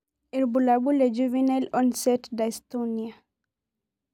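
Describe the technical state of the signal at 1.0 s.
The signal is intact at 1.0 s, with no audible fault at that point in the speech.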